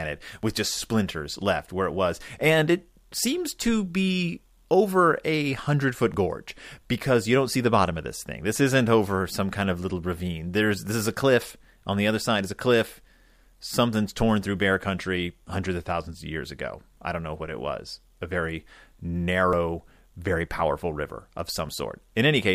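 At 0.43 s the speech jumps forward. About 20 ms of sound is missing. The same skip returns at 6.14 s, shorter, around 10 ms. At 19.53 s the jump is longest, around 30 ms, and at 21.69 s about 20 ms goes missing. No silence fills any gap. The two sides simply butt together. The likely cause is a dropped buffer (overrun): the hardware overwrote samples before the software collected them.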